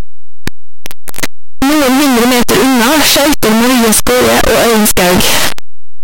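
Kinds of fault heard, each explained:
signed and unsigned mixed up: The 8-bit samples were likely read with the wrong sign convention, so the top bit of every sample is inverted and each zero crossing of the speech waveform becomes a leap from one end of the range to the other. Throughout the clip this sounds like loud, harsh, buzzing distortion, with soft sounds pushed up as loud as strong ones.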